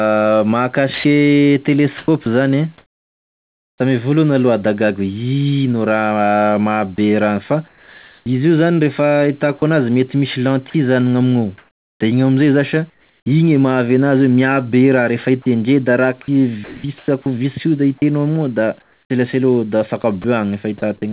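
From 0.94 to 3.8 s, 6.96 to 8.26 s, 9.58 to 13.26 s and 15.42 to 20.24 s, the speech turns choppy. Syllable edges drop to comfort noise, 0.6 to 1.24 s per stretch, against a band ending at 4 kHz. The likely cause is sound chopped by the voice detector.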